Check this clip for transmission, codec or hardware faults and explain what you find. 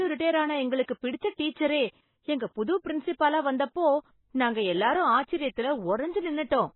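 The whole clip carries heavy MP3 compression damage, plus two short pre-echoes early on. The speech sounds dull and watery throughout, with nothing at all above 4 kHz. That hard ceiling and the swirly texture point to very low-bitrate encoding, likely MP3 at around 16 kbps. At that rate the encoder runs out of bits, so it chops off the treble at a fixed point and drops the weaker frequency detail. Those bits blink in and out from frame to frame, which gives the burbling, underwater quality you hear on the s sounds.

Pre-echo turns up twice, first from 0.83 to 0.88 s, right after "ரிடையர் ஆன", and again from 1.50 to 1.56 s. In each case a hiss creeps in about 53 and 59 ms ahead of a sharp onset, and the attack itself comes out soft and smeared. It's the codec's block processing at work. The noise budget is set by the loud onset late in a block, but it gets spread across the whole block, including the quiet stretch just before.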